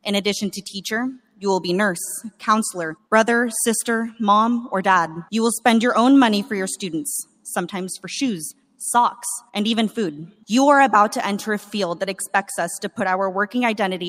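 At 1.14 to 1.42 s, 7.25 to 7.45 s and 8.54 to 8.8 s the sound sinks, dipping by about 12 dB for roughly a fifth of a second each time before the level returns. This is sound cut by the noise suppressor: in these moments the suppressor judged the wanted signal to be background noise and pulled it down harder than everything around it, leaving brief dips in level.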